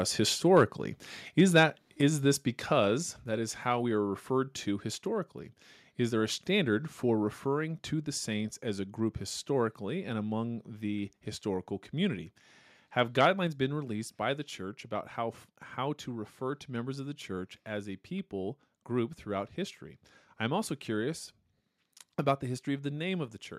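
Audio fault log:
0.56–0.63 s and 1.4–1.62 s, microphone overload: the loudest syllables crackle harshly, likely from input gain pushing peaks about 1–2 dB past the converter and chopping their tops.
2.01 s, 3.03 s and 13.47 s, microphone volume stepped down: voice and background drop suddenly by about 4, 3 and 3 dB, likely the call software cutting input gain.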